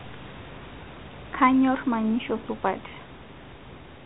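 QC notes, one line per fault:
No faults found in this speech clip. Room noise sits about 19 dB below the speech, and the 32 kbit/s G.726 telephone coding holds the band under 4 kHz with only light coding damage.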